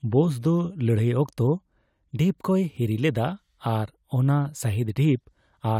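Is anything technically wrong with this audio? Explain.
No, nothing technical stands out here; this bit of speech comes through without any problem I can hear.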